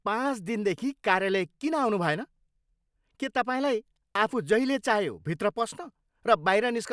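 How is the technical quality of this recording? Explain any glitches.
Nothing stood out as a technical problem on listening to this speech recording.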